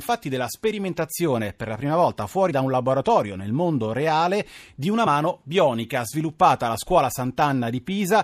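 Compressed frames were skipped twice in this speech recording: the decoder dropped what sounds like a single frame, lost from the stream or discarded as corrupt, at 2.50 s and again at 5.06 s. With frames about 26.1 ms long, each skip cuts roughly 30 ms, so the speech lurches forward.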